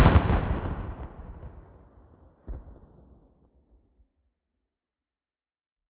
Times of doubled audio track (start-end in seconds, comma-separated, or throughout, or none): none